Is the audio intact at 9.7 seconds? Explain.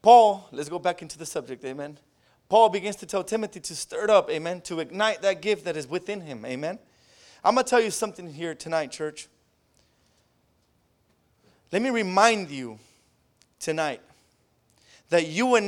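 Yes, at 9.7 seconds the speech plays through cleanly with no dropout, click, distortion or other technical fault.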